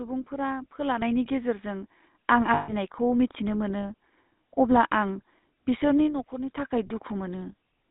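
The whole thing runs through the GSM full-rate codec, and you can plainly hear it. The speech has that buzzy, gravelly roughness, and the line only covers roughly 200 Hz to 3.7 kHz, so everything sounds boxed in. The texture fits the old 13 kbps full-rate coder.

At 1.02 s the microphone volume gets stepped up by about 6 dB. The speech and the background noise jump together in a single step, which is the call software deciding the input was too quiet. At 2.04 s it steps up again, this time by about 3 dB.

From 2.54 to 2.73 s there are lost GSM frames. For about 140 ms the decoder keeps repeating the last good frame, so you get a held, metallic ring instead of fresh speech. That length fits seven 20 ms frames going missing.

At 5.77 s a loudspeaker feedback squeal starts: a single tone near 4.9 kHz that swells over about a third of a second. It ends up sitting around 10 dB above the speech and keeps howling until 6.92 s. 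The loudspeaker's output is getting back into the mic with enough loop gain at that frequency to feed on itself.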